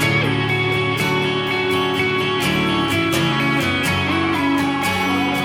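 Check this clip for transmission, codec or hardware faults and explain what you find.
No faults detected.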